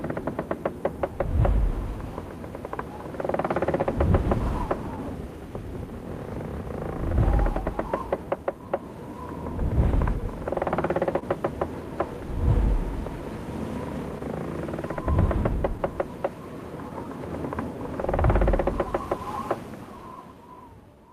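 The sender's clock runs about 2% slow against the receiver's, so there's clock drift between sender and receiver under all of these everyday sounds, leaving the receiver's buffer steadily short. From 0.22 to 20.97 s you get repeated timing corrections: the receiver keeps repeating tiny pieces, stretching things to about 99% speed and adding roughly 300 ms overall, which comes across as faint hiccups or a slightly unsteady pace. Between 3.80 and 7.15 s there are scattered short gaps, around five small holes of about 10 ms at most, each patched by carrying the previous sound forward, so you hear brief ticks or smears. The same thing happens again from 10.68 to 18.67 s with about seven patched gaps, the longest around 30 ms.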